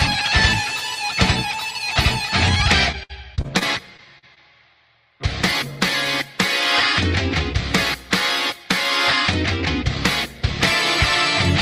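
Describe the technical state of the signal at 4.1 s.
At 4.1 s the signal sits inside a run of repeated packet loss (robotic sound) lasting from 2.92 to 4.38 s. Audio packets went missing or arrived too late eight times in this stretch, and each hole, the longest about 59 ms, was covered by extending the preceding sound. That patching fills roughly 15% of the span, so the audio comes out choppy, stuttering with small pieces missing.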